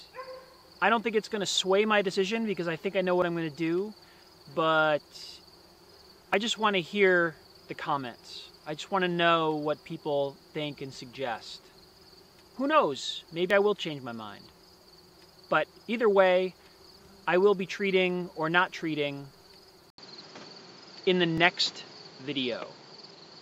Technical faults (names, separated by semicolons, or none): dropped buffer (overrun); input switched to a poorer device